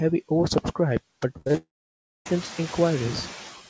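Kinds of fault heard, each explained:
Noise suppressor artifacts: Steady background noise is pulled down by about 10 dB throughout, band by band and frame by frame. On a spectrogram the noise floor flickers in patches between phrases and swells beneath the speech, especially once the room noise rises near 1.5 s.
Repeated packet loss (robotic sound): From 1.38 to 1.57 s six short holes, the longest 41 ms, are each patched by stretching the previous sound, giving a choppy stutter. The waveform shows repeated, slightly periodic copies of the same cycle, and the spectrogram shows smeared, stepped harmonics.
Long network dropout: From 1.57 to 2.32 s the sound turns into a fading buzzy continuation, then roughly 0.6 s of silence before the audio resumes, with that stretch missing. This is likely a long interruption in the stream. The waveform flattens, and the spectrogram goes blank across the whole band.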